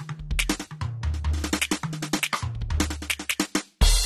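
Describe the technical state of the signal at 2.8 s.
At 2.8 s you're hearing the same damage that runs through the whole music clip: nothing at all above 13.7 kHz, and a smeared, warbly top end. That's most likely AAC compression, and the degree of it points to something like 32 kbps AAC-LC. At that rate the encoder drops the highest band and quantises the rest coarsely against its hearing model, so sustained material fizzes and loses definition.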